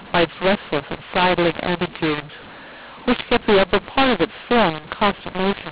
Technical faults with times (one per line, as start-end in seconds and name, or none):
0.00-5.72 mu-law and A-law mixed up